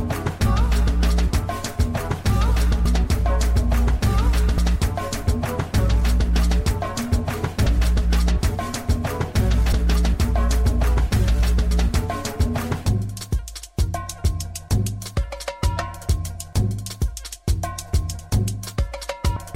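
Compressed frames are skipped seven times, at 2.85, 4.57, 7.66, 9.72, 11.71, 18.18 and 19.36 s. Whole blocks of audio vanish, roughly 70 to 150 ms each, which fits three to seven frames of about 26 ms. The sound jumps forward at each point.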